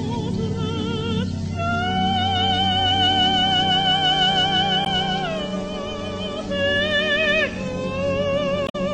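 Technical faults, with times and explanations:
4.82–4.87 s and 8.64–8.75 s, damaged data in a compressed stream: corrupted bytes make the decoder misread frames and lose sync while it hunts for the next header, giving brief disruptions of about 50 and 110 ms.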